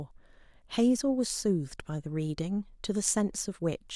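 No technical faults are audible anywhere in the speech. Nothing in the signal draws attention to itself at any point.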